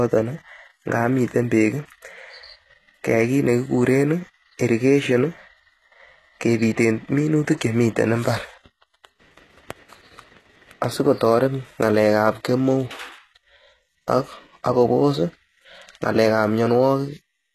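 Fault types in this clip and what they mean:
HE-AAC compression: the speech was likely encoded with HE-AAC at a very low bitrate, consistent with about 16 kbps. Only the lower band is coded, and the treble is rebuilt from copied lower bands, so sibilants sound plainly gritty and metallic, with nothing above 12.3 kHz.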